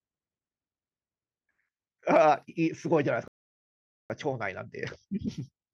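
At 3.28 s the speech cuts to dead silence for about 0.82 s, resuming at 4.10 s: a playback stall, likely the player starving for data or its thread being blocked. Unlike a brief dropout or click, the hard silence lasts long enough to register as a halt.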